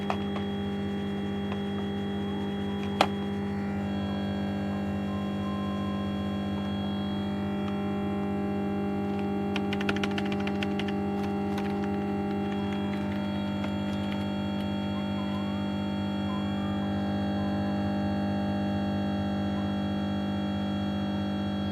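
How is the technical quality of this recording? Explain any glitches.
No glitches turn up anywhere in this recording. Nothing in the audio calls for a technical explanation.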